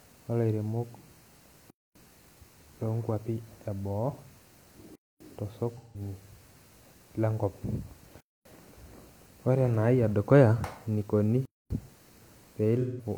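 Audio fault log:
1.70–1.95, 4.95–5.20, 8.20–8.45 and 11.45–11.70 s: gap between chunks. Each is a 250 ms hole of silence with abrupt edges, recurring every 3.25 s: 3.0 s of sound followed by the pause. The speech is delayed at each join, with nothing removed, as if each chunk starts late or carries padding. On a spectrogram, each gap appears as a clean blank vertical band. On the waveform, it is a flat line with sharp cut-off and restart.
5.78–6.01 and 12.81–13.05 s: AAC frame loss with concealment. Each time, about 170 ms of the signal is replaced by a smeared, noisy patch, which fits roughly four lost AAC frames. The decoder rebuilds them from the last good spectrum instead of the real content. On a spectrogram, the harmonic lines blur into a smeared, noise-like block that lacks the normal fine structure. On the waveform, the envelope looks smoothed and unnatural without dropping to silence.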